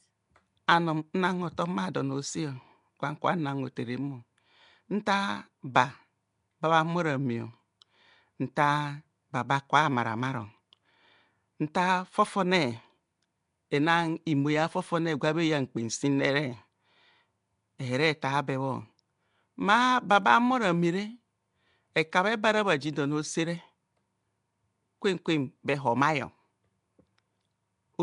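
Throughout, the speech carries a rough, hissy halo and a smeared, underwater quality with nothing above 10.6 kHz, likely Nellymoser compression filling starved bands with noise.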